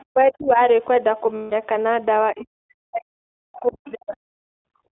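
The whole clip carries the iLBC codec's narrowband sound, limited to roughly 250 Hz to 3.6 kHz. Speech is rough and synthetic from independently coded 20 ms frames, which fits the 15.2 kbps mode.

From 0.00 to 0.04 s a faint second voice, around 35 dB below the speech, is likely the other side's voice leaking through past the echo canceller.

From 0.11 to 0.60 s the speech dips by up to around 30 dB. This is likely speech suppressed in double talk, with the canceller attenuating everything while both sides spoke.

From 1.36 to 1.53 s, lost iLBC frames leave a 160 ms stretch of repeated pitch cycles. It sounds like a held, buzzy vowel, and the speech recovers immediately afterwards.

From 2.32 to 4.66 s, likely double-talk suppression again pulls the speech down, by up to roughly 40 dB, over about two seconds. Within that stretch, from 3.56 to 3.91 s, the leaking far-end voice returns more strongly, around 20 dB below the speech, and one further lost frame at 4.12 to 4.14 s briefly buzzes.

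From 4.94 to 4.97 s the background is gated by the echo canceller, dropping by about 37 dB.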